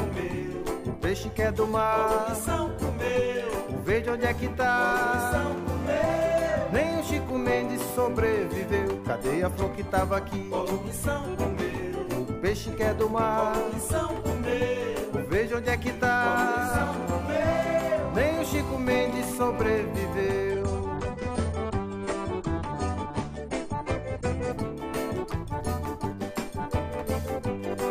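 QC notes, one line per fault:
20.52–24.52 s: adaptive stream at a lower bitrate. Quality switches abruptly, without a gap, to a leaner encode. Treble vanishes above 10.1 kHz, and codec artefacts thicken.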